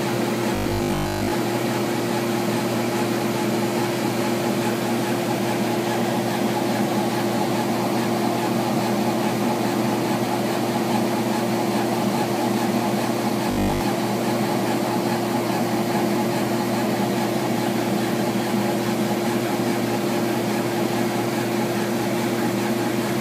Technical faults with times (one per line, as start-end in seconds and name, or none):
0.55-1.31 robotic sound from repeated short buffers
13.51-13.81 robotic sound from repeated short buffers